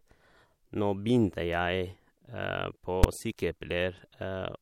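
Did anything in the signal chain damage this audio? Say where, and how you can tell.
Yes. In processing, a calculation produced invalid numbers that were pinned at full scale for one block at 3.04 s. This fits a 256-sample block and is heard as one bang.

In the codec, pre-echo at 3.37 s spreads quantisation noise about 14 dB louder across 18 ms before an attack. Without short blocks, the 26 ms window smears it.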